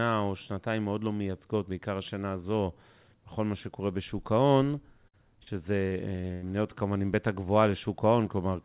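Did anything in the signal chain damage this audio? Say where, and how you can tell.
Yes. Network stage: a burst of packet loss at 5.08 to 5.15 s drops about 60 ms; the receiver extends the last sound and fades it out before audio resumes further on.

Network stage again: short concealed packet loss at 5.43 to 5.54 s leaves a brief smear where about 40 ms went missing and was patched from the preceding sound.

Network stage: repeated packet loss (robotic sound) from 5.87 to 6.44 s, with four gaps up to 90 ms and about 30% of the span concealed, giving choppy sound with pieces missing over the narrowband G.711 call path, which carries nothing above 4 kHz.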